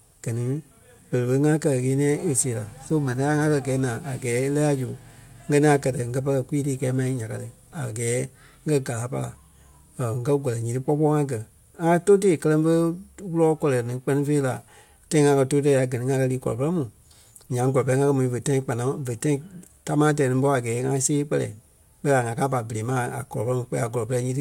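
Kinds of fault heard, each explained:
No technical faults can be heard anywhere in the recording; the signal stays continuous, with no audible disturbances.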